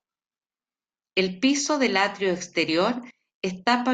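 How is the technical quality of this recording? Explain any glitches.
No glitches or technical faults can be heard here.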